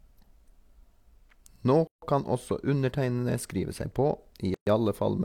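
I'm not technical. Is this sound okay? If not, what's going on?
No, there are two short dropouts in the speech. At 1.87 s the sound breaks off in a gap of about 150 ms, then picks up again right before "kan også undertegnede skrive". At 4.54 s there's another hole, about 130 ms long. Both are a gap at a join of encoded pieces: the recording was saved in chunks, and each chunk kept a bit of built-in silence at its edges, so the joins open up instead of flowing smoothly.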